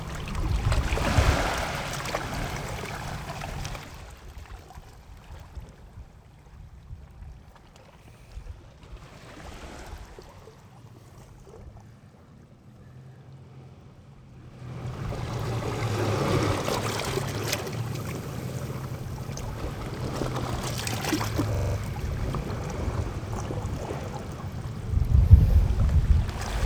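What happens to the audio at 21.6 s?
A system hang loop runs from 21.55 to 21.76 s: the computer stalled while the sound hardware kept replaying its ring buffer, so one 42.7 ms slice, which fits a 2048-sample buffer, repeats exactly five times. At a repeat rate of 23.4 Hz, the sound becomes a rapid, machine-gun-like stutter of the same fragment rather than a steady buzz. Essentially none of the surrounding audio is lost.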